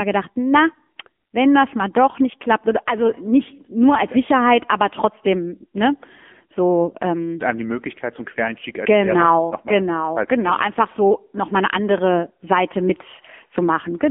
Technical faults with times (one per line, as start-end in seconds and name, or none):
0.00-14.11 AMR narrowband mobile codec